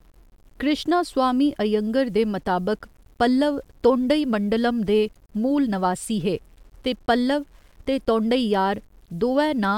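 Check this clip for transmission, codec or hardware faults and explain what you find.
There's one problem, and it runs through the whole speech clip: a grainy, signal-following distortion that's most likely low bit depth without dither. The quiet tails and soft consonants turn gritty, with the error sitting roughly 40 dB below the speech. That fits rounding to around 9 bits with no dither, so the quantisation error tracks the waveform instead of spreading out as smooth hiss.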